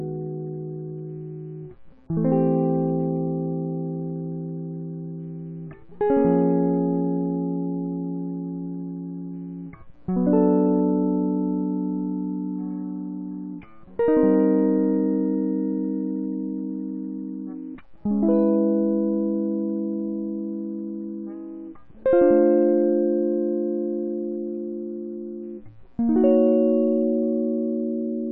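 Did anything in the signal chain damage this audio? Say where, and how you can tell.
No, nothing in the signal chain has audibly damaged this music. At no point in the recording does any stage of the chain leave a mark a listener could pick out.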